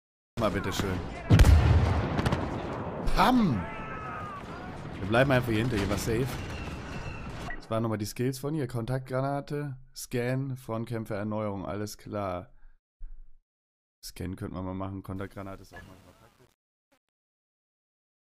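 Right at the top there's a cut-off start. The sound jumps in at 0.37 s out of dead digital silence, already mid-sound, with no attack or lead-in. The capture just began late and chopped off whatever came before.

Near the end, the fade-out runs from about 15 s to 18.4 s, and from 15.16 s it picks up truncation distortion. The fade's gain stage is keeping too few bits, which fits roughly 9-bit resolution, and there's no dither. From 15.47 s to the end at 18.37 s, the quiet tail turns gritty and steppy instead of thinning out cleanly.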